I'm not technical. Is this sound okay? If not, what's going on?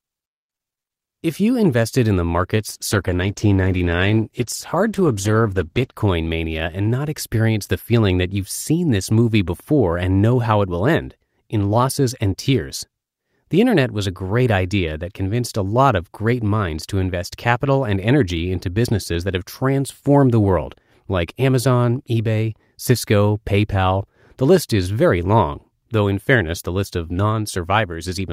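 No. From 2.58 to 5.99 s, after "you invested in the", a call bitrate drop makes the speech rough and muffled. Unlike a dropout, it never goes silent, and it clears by "mania and not experience".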